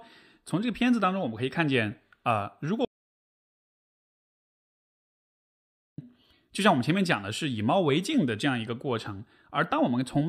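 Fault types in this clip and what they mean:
Audio dropout to silence: The speech stops abruptly at 2.85 s and returns mid-flow at 5.98 s. The gap lasts about 3.13 s. It is silence, with no room tone or background hiss at all. That total emptiness means the input itself was lost, most likely through a disconnected device, a failed link or a stray mute, while the recorder kept writing silence. Whatever was said during those seconds is gone.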